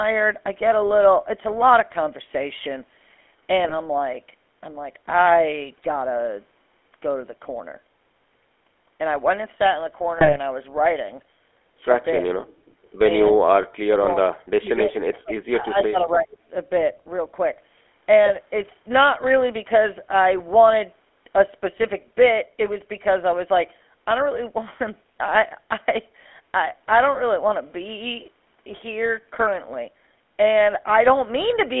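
GSM full-rate codec, throughout: the whole recording carries the buzzy, gravelly roughness of the original GSM speech coder, which fits a 13 kbps full-rate stream. That coder rebuilds the voice from a vocal-tract filter driven by a sparse, regularly spaced pulse train, so the fine detail of the excitation is lost and the voice takes on a grating texture. The line band runs only from about 250 Hz to 3.4 kHz, so the sound is thin and boxy with no air on top.

GSM bit errors, 3.64 to 3.75 s: the sound briefly breaks into squawking and gargling. Corrupted bits reaching the decoder scramble the filter, pitch or gain values, so for a few frames the spectrum warps or the level jumps. The same happens more heavily from 10.18 to 10.39 s, which points to a higher error rate there, and once more briefly from 18.26 to 18.31 s.

Speech suppressed in double talk, 12.2 to 12.33 s: the talker suddenly dips by roughly 30 dB, likely because the other party spoke at the same time and the echo canceller, unable to separate them, turned both down. 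The talker dips again by about 30 dB from 13.31 to 13.53 s. From 13.82 to 15.34 s the voice falls away by as much as about 40 dB. From 15.5 to 16.29 s it is held down less deeply, by around 20 dB.

Echo leak, 12.83 s: a faint, delayed copy of the voice comes back 273 ms late, some 40 dB below the speech. It likely comes from a loudspeaker at the far end whose canceller failed to remove all of the returned sound. Louder scraps of the same echo, at about 20 dB down, appear from 15.78 to 15.82 s, and at about 25 dB down from 16.33 to 16.37 s. Each scrap is short.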